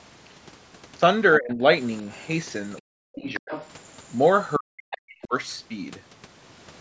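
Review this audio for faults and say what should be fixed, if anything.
Speech suppressed in double talk: the talker's level collapses at 1.38–1.63 s, dipping by about 25 dB, then at 2.84–3.52 s and 4.58–5.34 s by about 40 dB. The likely cause is an echo canceller that, with both sides talking, attenuates everything. Unlike a packet dropout, the later two dips line up with the other voice appearing.

Other side's voice leaking through: a second voice surfaces faintly at 2.16–2.22 s and 2.76–2.80 s, about 40 and 35 dB below the talker. It returns more strongly at 3.34–3.91 s and 4.91–5.15 s, only about 15 dB down. This is likely residual loudspeaker echo. Unlike reverberation, it is a separate voice rather than a tail of the talker's own, heard within the call's 8 kHz bandwidth.

To prevent both, use a headset or improve the echo canceller's double-talk detection and echo-path modelling, so it removes the echo without ducking the local talker.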